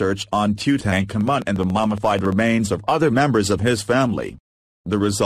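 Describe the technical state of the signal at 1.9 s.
At 1.9 s the signal carries a train of clicks, running from 1.21 to 2.33 s: about fifteen near-identical pulses at a regular 14.3 per second, peaking a few dB above the sound. They are heard as steady ticking, likely from electrical interference or a faulty connection or power supply.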